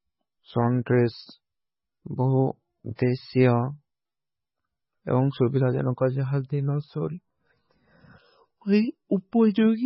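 From the start, the speech has a hard ceiling with nothing above 5.5 kHz, and what's left sounds watery and swirly, with the s sounds going chirpy and metallic. That's likely heavy MP3 compression at a very low bitrate, something around 16 kbps. With so few bits, the encoder chops off the treble at a fixed point and keeps dropping weaker frequency lines in and out from frame to frame, which gives that bubbling texture and smears the consonant edges.

At about 2.95 to 2.99 s there's pre-echo: a short hiss creeps in roughly 36 ms before a sharp onset, and the attack itself lands soft rather than crisp. The codec spreads its quantisation noise across the whole block, so noise scaled for the loud attack leaks into the quiet gap just ahead of it.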